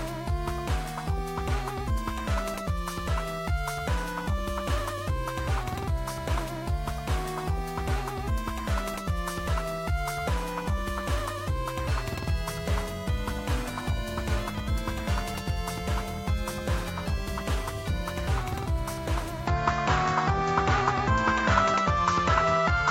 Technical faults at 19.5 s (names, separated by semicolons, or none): input switched to a poorer device